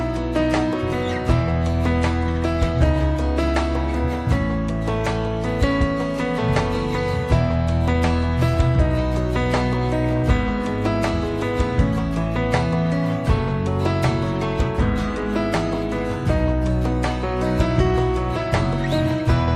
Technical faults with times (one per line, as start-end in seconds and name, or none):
2.31-2.36 short stall from a late packet